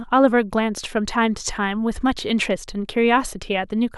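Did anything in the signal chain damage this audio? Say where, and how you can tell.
No, nothing audible points to damage at any stage of the chain: the speech signal stays continuous and intact throughout.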